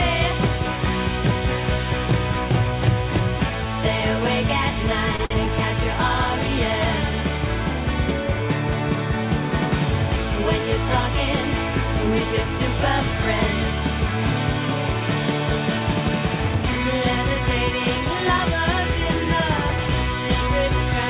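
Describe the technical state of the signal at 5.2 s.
A packet arrived late and the jitter buffer ran dry twice, a short stall from a late packet at 5.16–5.21 s and again at 5.25–5.32 s, stretching the sound by about 28 ms and 55 ms into brief held drags with a slight buzz or dip and nothing lost.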